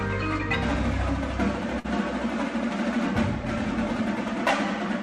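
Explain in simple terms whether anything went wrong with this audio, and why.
Something did go wrong, briefly, at about 1.79 to 1.86 seconds: a short stall from a late packet. One piece of the audio arrived late, so the player had nothing new to play and held the last bit of sound for about 50 milliseconds until it caught up. Unlike a lost packet, nothing is cut out. The sound simply hangs for an instant, with a slight buzz or dip, then carries on from exactly where it stopped, about 50 milliseconds later than before.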